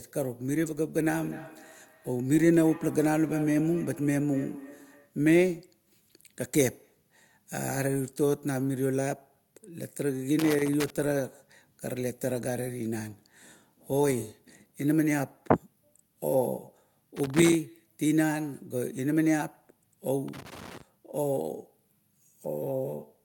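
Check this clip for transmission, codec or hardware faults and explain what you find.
Two faults are present: an acoustic echo loop between devices near the start, and a loose connector problem later on.

Feedback echo between two devices runs from 0.94 to 5.17 s. A second device in the same room replays the far end's audio, which the microphone captures again. Its echo canceller cannot remove another device's output, so the speech returns roughly every 0.3 s, peaking about 17 dB below the direct voice, thinner and ringing.

Loose connector crackle occurs from 10.39 to 10.90 s, 17.17 to 17.55 s and 20.28 to 20.81 s. A worn or dirty contact intermittently breaks the circuit as it moves, chopping the signal into short irregular bursts of scratchy crackle.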